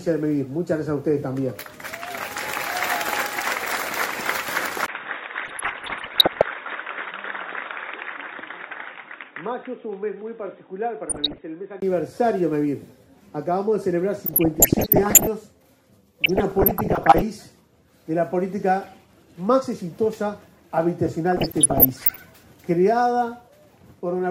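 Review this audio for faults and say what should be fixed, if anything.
From 4.86 to 11.82 s the sound goes dull and boxy: everything above 3.8 kHz is gone, the level drops by about 10 dB, and a new noise floor appears roughly 45 dB under the signal. There's a 20 ms dropout at the switch-over. That's most likely an input switched to a poorer device, like a fallback mic or a headset call profile, with its own narrow band, tone and hiss. To prevent it, lock the recording input to the intended device and turn off automatic device switching.

There's also DAB burbling in five bursts: 5.43–6.44 s, 11.09–11.41 s, 14.26–15.27 s, 16.21–17.22 s and 21.32–22.21 s. Each one puts short blips of noise into individual sub-bands. Weak reception let bit errors, somewhere around a percent, slip past error correction into the MP2 data, corrupting samples and scale factors. The longer bursts fit about 42 hit frames. 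To prevent it, take the feed from a stronger, well-aimed aerial or a wired or stream source instead of marginal DAB reception.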